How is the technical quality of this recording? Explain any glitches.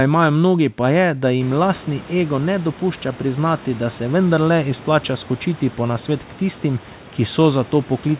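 Nothing stood out on listening: no glitches could be heard in this speech recording, which carries the narrow, telephone-like sound of a G.711 A-law call path with nothing above 4 kHz, along with room noise that rises by about 19 dB at around 1.5 s yet stays roughly 22 dB below the speech.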